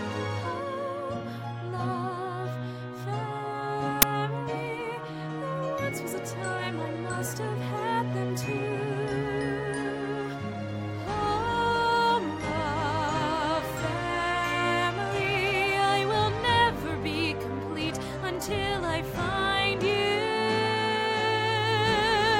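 At 4.02 s there is an uninitialised buffer. A block of about 10 ms was played before any audio had been written into it. Leftover memory was read out as samples. The result is a sudden, loud crack.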